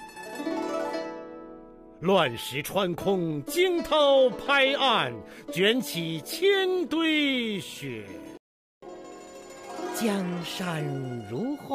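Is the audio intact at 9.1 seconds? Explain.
No. At 9.1 seconds the player is in a catch-up at higher speed, which runs from 8.82 s to the end of the clip. After a stall it has a backlog to clear, so it resamples the buffered audio and plays it at 1.1 times normal speed. Because resampling changes speed and pitch together, the sound here is hurried and sits roughly a semitone and a half sharp.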